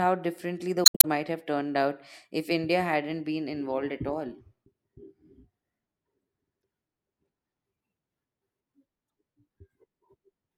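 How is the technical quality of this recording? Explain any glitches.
The recording is marred by three bursts of damaged data in a compressed stream. The first, from 0.83 to 1.05 s, between "differently the" and "might have turned out", is a glitch about 0.2 s long. Two shorter blips follow at 6.60 to 6.63 s and 9.07 to 9.10 s. At each point corrupted bytes made the decoder misread frames, lose sync and hunt for the next valid frame header, garbling the audio.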